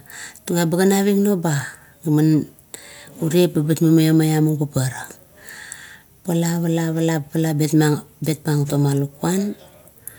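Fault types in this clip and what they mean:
Nothing stood out on listening to this speech recording.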